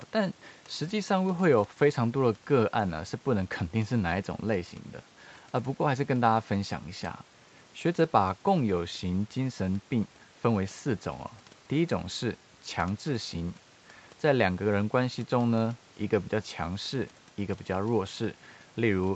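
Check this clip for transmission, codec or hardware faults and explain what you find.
No transmission, codec or hardware faults are audible.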